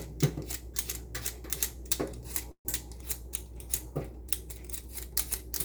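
At 2.51 s a call audio freeze interrupts the sound until 2.67 s. Delayed packets most likely drained the jitter buffer, so the receiver fills 135 ms by extending the last sound, fading to 80 ms of silence, then resumes where it stopped, about 135 ms later, with nothing lost.

From 2.96 s to the end a call bitrate drop sets in. A fallen bandwidth estimate forces the encoder from 128 kbps to 26 kbps, holding the minimum for 1.69 s, so the coarser coding leaves the sound rougher and duller, with its high frequencies thinned.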